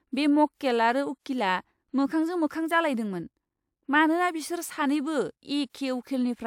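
No technical faults can be heard anywhere in the speech; the signal stays continuous and stable throughout.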